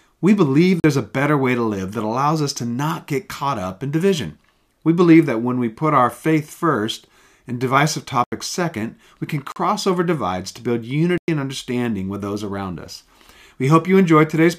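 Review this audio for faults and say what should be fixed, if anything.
The speech drops into a block of digital silence four times: 0.80–0.84 s (40 ms), 8.24–8.32 s after "faith first and divisive" (80 ms), 9.52–9.56 s after "second we can" (40 ms), and 11.18–11.28 s before "and understanding with those" (about 100 ms). Each gap cuts out and back in because the samples snap to zero with no fade. That points to output buffers not being filled in time. Give the audio callback more headroom, with larger buffers or less work per block, so it never underruns.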